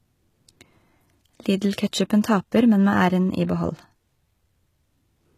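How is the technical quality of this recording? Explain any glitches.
The recording is noticeably degraded by compression throughout. The s sounds come out gritty and lispy, the upper treble has a metallic sheen, and nothing is present above about 14.9 kHz. This is likely HE-AAC compression at a low rate, consistent with roughly 20 kbps. The codec keeps the lower spectrum and rebuilds the treble by copying lower bands upward, so those synthetic highs don't match the speech's real harmonics.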